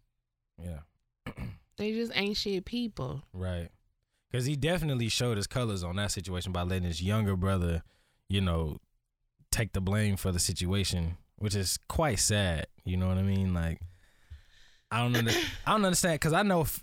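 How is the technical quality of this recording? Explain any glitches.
The recording shows no technical glitches; the signal holds steady and intact throughout, with nothing in it that points to a fault in capture, processing or playback.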